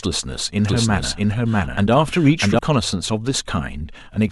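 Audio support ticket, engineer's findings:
Doubled audio track, 0.65–2.59 s. Likely a second, slower capture path summed into the output with the direct feed. Speech repeats roughly 0.7 s late at near-equal level, full-band, dry, no decay; the copy cuts in and out abruptly.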